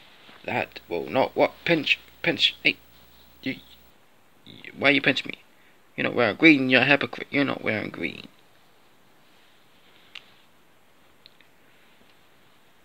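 From 0.50 to 3.90 s the audio carries a rough, steady buzz with a gritty hash riding above it and a faint, piercing whine near 15.7 kHz, all sitting about 35 dB below the main signal. This is video or display buzz: a screen or video cable has coupled into the audio path, putting the picture's 59.94 Hz field rate in as the low buzz and its line scanning in as the very high tone.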